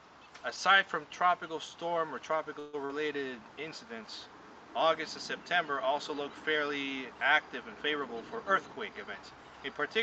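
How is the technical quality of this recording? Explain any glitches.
The recording carries three call-related glitches, all within a codec path that limits the top end to about 8 kHz.

Call audio freeze, 2.59 to 2.75 s: the sound stalls into a fading continuation for about 136 ms and then resumes where it stopped, likely because delayed packets emptied the jitter buffer.

Short concealed packet loss, 2.85 to 2.91 s: about 40 ms never reached the decoder, so the receiver extrapolated the preceding sound, producing a brief smear before blending back.

Jitter buffer speed-up, 8.00 to 9.37 s: to shrink excess buffered delay, the receiver cut many short pitch-period pieces, around 150 ms in total, so playback runs at 109% speed, audibly hurried at unchanged pitch.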